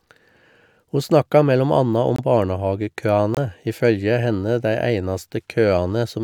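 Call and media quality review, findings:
Corrupt frame muted, 2.16–2.20 s, right after "snakka mellom anna": bit errors in a compressed frame, decoder rejected it, player substituted silence. Abrupt dropout of about 38 ms, consistent with one frame lost.

Corrupt frame muted, 3.35–3.38 s: same decoder rejection and silence fill. Hard-edged gap of about 36 ms, again fitting a single frame. Timing preserved in both cases, so speech resumes on schedule with no drift.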